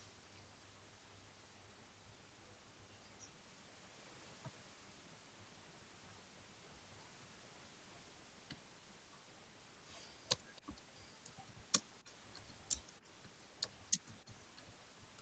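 At 12.07 to 12.11 s, an echo canceller on a loudspeaker at the far end likely let a fragment of the picked-up sound slip through and return. This echo leak is a brief, very faint repeat of the speech, arriving about 309 ms late and roughly 30 dB down.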